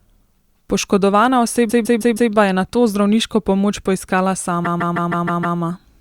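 Repeated frames: a run of compressed frames, about 0.16 s long, was delivered more than once, so the decoder replays it. From 1.69 to 2.31 s it plays four extra times before "je nato zdravniško pomoč", and from 4.64 to 5.58 s six extra times, producing a stuttering loop that stretches the speech.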